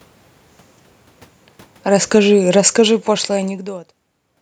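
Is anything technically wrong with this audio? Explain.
Yes. From 1.78 s to 4.3 s the automatic gain control is falling: having judged the input too loud or its background noise too strong, it pulls its gain down steadily, by about 13 dB in total. The speech and the room noise behind it sink together, which separates this from the talker simply moving around 1.5 s and 3.5 s. On a waveform the envelope tapers over those 2.5 seconds, and a spectrogram shows the whole band, noise floor included, dimming evenly rather than at any one frequency.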